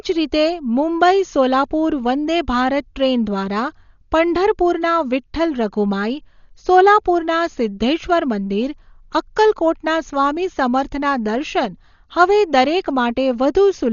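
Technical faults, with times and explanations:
Throughout: Dolby Digital compression. The speech sounds dull and muffled, with nothing above 7 kHz. A rough, fluttering noise clings to the voiced sounds. The damage is heavy. The likely cause is a Dolby Digital encoder short of bits, which fits a bitrate around 40 kbps. It cut the top of the band and gave many frequency lines no detail. The decoder filled those gaps with noise, hence the grainy flutter.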